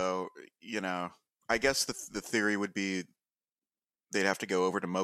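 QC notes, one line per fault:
1.51–2.31 s, filter restarted on every block: after "you know", a 200 Hz buzz tracking the speech level, each block's filter starting from silence, which fits 5 ms blocks.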